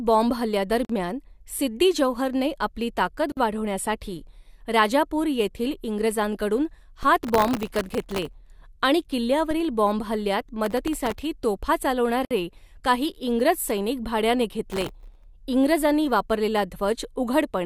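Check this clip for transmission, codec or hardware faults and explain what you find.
Three kinds of fault are present in this speech: gaps at joins of encoded pieces, DC steps, and bursts of processor overload crackle.

Gaps at a join of encoded pieces occur at 0.85 s (about 46 ms), 3.32 s (about 51 ms) and 12.25 s (about 59 ms). The speech was encoded as separate segments and concatenated without removing each encoder's leading delay and final-frame padding. That leaves a short hole of silence with smeared edges, after which the speech resumes exactly where it left off.

DC steps occur at 7.03 s, right after "वाढविण्यासाठी राजापूर येथील इंग्रजांकडून", and again at 9.51 s. At each, the waveform's zero line jumps abruptly, producing a low thump or click while the speech continues unaffected. The offset then drains away rather than holding, consistent with a high-pass stage near 5 Hz pulling the baseline back toward zero.

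Processor overload crackle runs from 7.24 to 8.34 s, from 10.65 to 11.22 s, and from 14.71 to 15.24 s, the last between "सैनिक भाड्याने" and "इंग्रजांनी वापरलेला". The processing could not finish its very short buffers, well under a millisecond each, in time. It missed many deadlines in a row and replayed stale audio for each one. The result is a gritty, tearing crackle over the speech that stops once the load eases.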